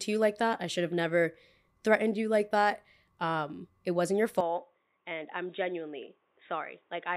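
At 4.41 s the speech abruptly turns dull and boxy and stays that way to the end. Nothing above about 3.8 kHz gets through, the level falls by roughly 5 dB, and faint new background noise appears well below the speech. There's no gap at the change. The likely cause is the input switched to a poorer device, such as another microphone or a headset's call profile, with a narrower band, its own tone and its own noise.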